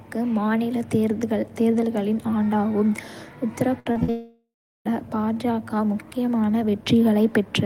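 From 3.79 to 3.88 s there is a burst of packet loss: about 60 ms of speech never arrived, and the receiver stretched the last sound across the hole while fading it. On a spectrogram the continued sound runs flat and dim before the speech jumps ahead.

Right after "தேர்தல்களின் ஆண்டாகும் உத்தரப்", two short concealed packet losses follow, at 3.92 to 3.97 s and 4.03 to 4.10 s, each losing about 40 ms. They sound like quick smears. The waveform shows brief, overly regular patches blended back into the real signal.

From 4.10 to 4.87 s a much longer gap follows, the likely result of a long network dropout. About 760 ms is missing. The last sound is carried on and decays, then about 350 ms of silence remains. On a spectrogram this appears as a fading smear and then an empty band before the speech resumes.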